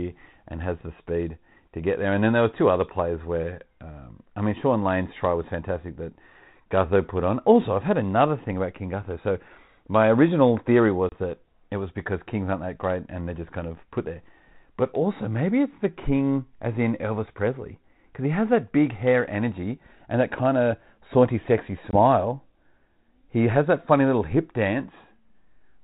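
Speech over a G.726 ADPCM link, with light coding noise that fits 32 kbit/s. Packet loss on the ADPCM call cuts two hard-edged silent gaps. At 11.09 s, after "my original theory", 30 ms of a few packets drops out. At 21.91 s, after "kind of saunty sexy", 20 ms goes. Each time, the decoder's predictor and step size lose step with the sender. Speech resumes with brief distortion.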